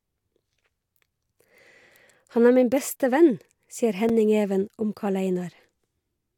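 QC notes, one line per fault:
4.09 s, block of digital silence: just after "min beste venn sier", about 5.3 ms of the speech drops abruptly to silence and returns with no fade, which fits an unfilled 256-sample output buffer; a gap this short is heard as a tick or dip rather than as silence.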